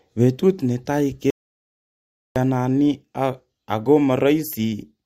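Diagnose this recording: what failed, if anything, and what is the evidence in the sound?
Speech cuts to dead silence, no room tone, from 1.30 to 2.36 s: audio dropout to silence, likely lost input while recording continued.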